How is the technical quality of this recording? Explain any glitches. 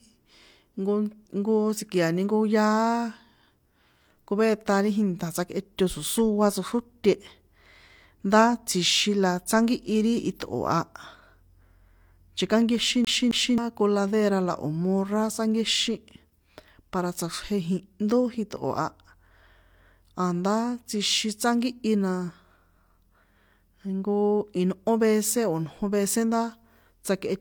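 The recording has two faults: a coding problem across the whole speech clip and a skip in the middle.

Low-bitrate audio saved at a high bitrate: Throughout, the speech carries the artefacts of a heavily compressed source, even though the file is an MP3 at a generous rate. The sound points to a first pass through a low-rate codec, likely HE-AAC around 48 kbit/s, later re-encoded as MP3 near 194 kbit/s. The second encode can't restore detail the first stripped out. Content stops at 20.2 kHz.

CD stuck on one turn: From 13.05 to 13.58 s, just before "coladera la", the audio jumps back and replays the same 0.27 s segment twice, with a brief mute at each jump. This is the mechanism of a scratched disc knocking the laser back one track at the same spot on each rotation. It gives the short, evenly timed stutter of a skipping CD before playback continues.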